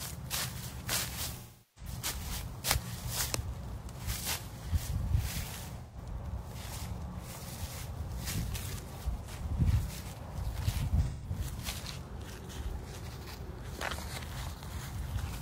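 AAC frame loss with concealment hits at 1.37–1.91, 5.81–5.97 and 11.06–11.30 s. The decoder patches over missing frames from the last good spectrum, leaving smeared, phasey stretches.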